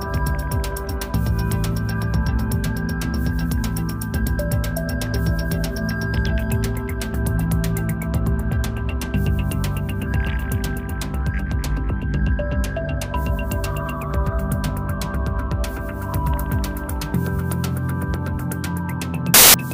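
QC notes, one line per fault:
19.34–19.54 s, file tags played as audio. A hard-edged burst of very loud white noise. Compressed cover-picture data is being read as samples.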